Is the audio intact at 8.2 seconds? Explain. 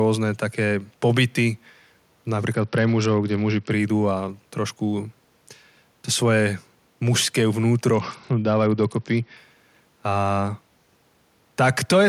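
No. At 8.2 seconds the speech sounds dull and gritty, with the treble dulled and a coarse noise riding on it from 7.94 to 9.37 s. This is a Bluetooth SBC bit pool drop: a congested link cut the bit budget, which points to a fall from a bit pool near 31 to about 8, around 66 kbps. The top sub-bands got almost nothing and the rest were coarsely quantised.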